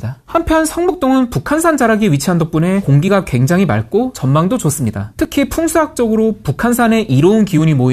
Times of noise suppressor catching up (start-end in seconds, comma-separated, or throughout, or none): none